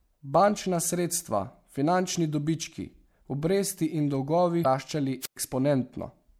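A speech recording with two separate faults. First, damaged data in a compressed stream: a stretch of corrupted bytes makes the decoder misread frames and hunt for the next valid header, so a short glitch breaks the speech from 4.61 to 4.66 s. Shortly after, a wireless microphone squelch dropout occurs: the analogue FM radio link fades far enough that the receiver's squelch shuts the output, so from 5.21 to 5.36 s a brief burst of hiss gives way to a hole of near silence lasting about 108 ms before the speech comes back.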